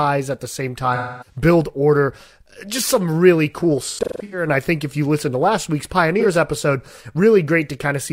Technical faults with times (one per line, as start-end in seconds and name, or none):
0.95-1.37 AAC frame loss with concealment
3.83-4.47 AAC frame loss with concealment
6.19-6.26 AAC frame loss with concealment